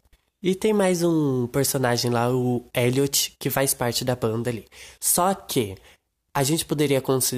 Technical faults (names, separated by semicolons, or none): none